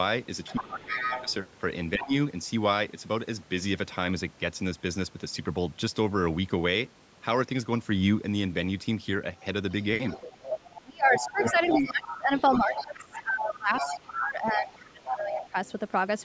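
In this speech clip, an echo canceller likely left the loudspeaker signal in the microphone, so the other side's voice is leaking through at 0.43–1.34 s, 2.01–2.15 s and 9.37–15.72 s, about 5 to 15 dB below the talker. Meanwhile, both sides talking at once likely led the canceller to turn everything down, so speech is suppressed in double talk at 0.5–1.29 s, 1.96–2.13 s and 10.8–15.55 s, dipping by up to about 20 dB.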